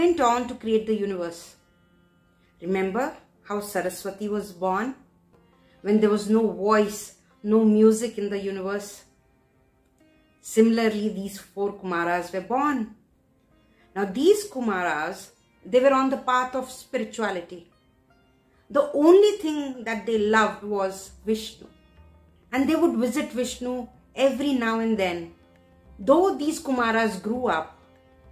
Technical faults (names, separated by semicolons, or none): none